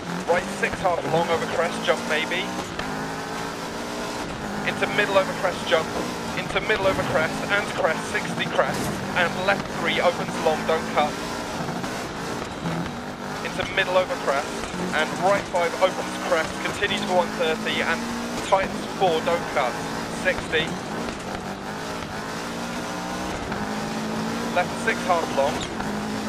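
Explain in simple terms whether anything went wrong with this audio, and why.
At 18.37 to 18.40 s, a brief glitch cuts through the sound, lasting about 34 ms. This is damaged data in a compressed stream: part of the file was corrupted, so the decoder misread that stretch and briefly lost its place before locking back on.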